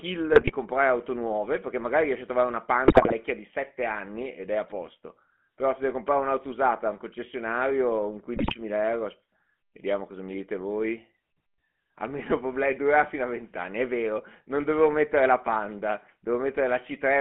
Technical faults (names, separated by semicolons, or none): GSM full-rate codec; GSM bit errors